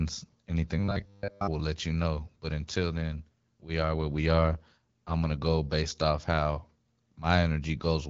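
From 0.79 to 1.48 s the speech turns into a rigid, metallic 100 Hz buzz, likely robotic sound from repeated short buffers, with roughly 10 ms chunks looped over most of the real audio. From 2.97 to 5.38 s it grows rougher and more synthetic: an AMR rate drop, with the AMR-WB codec falling from 12.65 to 8.85 kbit/s.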